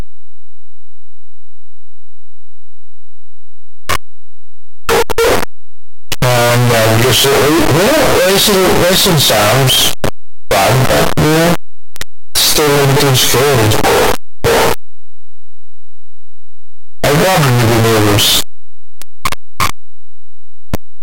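The 8-bit samples were likely read with the wrong sign convention, signed data treated as unsigned or the reverse, so the top bit of every sample is flipped. For the whole clip, each zero crossing in the speech becomes a jump across the full range. The result is a very loud, harsh distortion, with quiet passages pushed up as loud as everything else.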